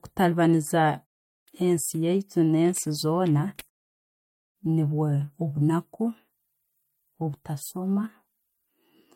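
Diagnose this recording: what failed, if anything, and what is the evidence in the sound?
Nothing failed here.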